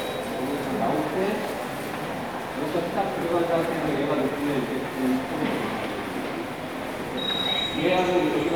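Listening to this recording of sounds, nothing stood out as a technical problem at any point.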